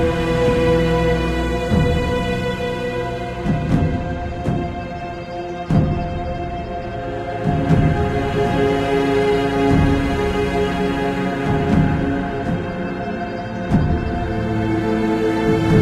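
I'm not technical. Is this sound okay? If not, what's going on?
Yes, nothing stood out as wrong when listening to this recording.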